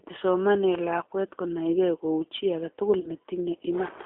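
From start to finish the speech carries G.729 codec damage that is plainly audible. The line is confined to roughly 300 Hz to 3.6 kHz, and the voice is rebuilt from a vocal tract filter plus a sparse pulse excitation, which fits an 8 kbit/s G.729A encoder. What separates this from simple telephone band-limiting is the slightly rough, synthetic grain on every syllable. A clean narrowband line would sound muffled but still natural.

From 3.00 to 3.11 s comes VoIP packet loss concealed by the speech codec. About 30 ms of stream went missing, which fits three lost 10 ms frames. The decoder carried its last pitch and filter forward at falling gain, so the sound smears into a buzzy tone or coloured noise that fades. Because each frame leans on the previous one, it stays weak and distorted until about 3.1 s. A bare dropout would leave a silent gap or a click instead of this stretched tail.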